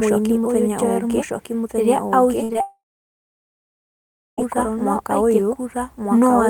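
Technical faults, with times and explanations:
Throughout: doubled audio track. A second, full-band copy of the speech runs about a second behind the first at roughly the same loudness, so each phrase is heard twice. Unlike a room echo, the late copy has no decay and no room colour. Its fixed offset and equal strength point to a likely second capture path running slower than the main one, with both paths mixed into the output.
2.43–2.51 s: burst of packet loss. About 60 ms of audio failed to arrive in time, and the receiver covered roughly 53 ms of it by extending the last sound and turning it down. The result is a held buzz or fading hiss, after which the speech resumes further on with a small piece missing. This is longer than the brief smears that follow, but far shorter than the later dropout.
2.53–2.56 s and 2.58–2.61 s: short concealed packet loss. Each gap lost about 20 ms. The receiver filled 17 ms and 10 ms respectively by continuing the preceding sound before blending back into the real signal. 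Each one is heard as a quick smear or wobble rather than a held tone. A short consonant may drop out.
2.61–4.39 s: long network dropout. The audio stops for nearly 1.8 s. The last sound is stretched into a fading buzz or hiss for about a fifth of a second, and then roughly 1.6 s of silence follows before the speech returns. The likely cause is a stall in the network that delivered nothing for that whole stretch. It differs from the shorter losses because the concealment runs out completely, leaving real silence and a clearly missing passage.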